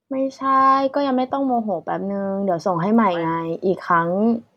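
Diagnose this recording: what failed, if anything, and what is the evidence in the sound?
The sample-rate conversion stage failed: the resampler restarted on every block. Throughout, faint ticks recur every 50 ms, a 20 Hz buzz present only with speech, because each block edge was computed without its true neighbouring samples. A spectrogram shows thin vertical lines spaced 50 ms apart.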